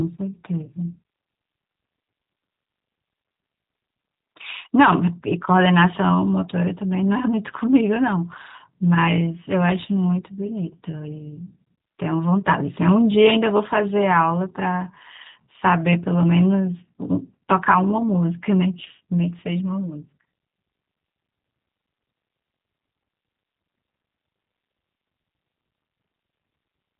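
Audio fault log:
throughout: G.729 codec. Nothing passes above 3.8 kHz. The speech sounds plainly rough and synthetic, rebuilt from a vocal tract model at what fits 8 kbit/s.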